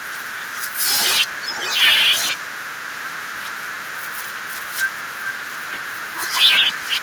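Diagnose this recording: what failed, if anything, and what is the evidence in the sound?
Echo leak, from 1.25 to 1.82 s: a delayed copy of the speech comes back about 560 ms after the original, only a few decibels below it, and then stops. This points to call processing. The likely cause is a far end playing the call through a loudspeaker whose echo canceller failed to subtract what its microphone picked up, so the residue was returned down the line.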